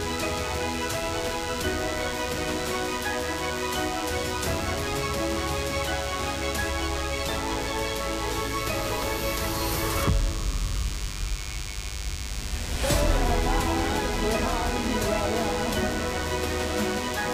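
Throughout, a DECT cordless phone buzz sits about 10 dB below the sound: a thin, harmonic-rich 100 Hz burst pattern, rectified radio pulses, unlike smoother mains hum.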